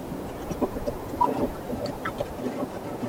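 From start to end, the speech runs at double speed and a full octave high, the signature of a wrong sample rate, which fits 24 kHz audio played back at 48 kHz. Unlike a pitch shift or time-stretch, tempo and pitch rise together.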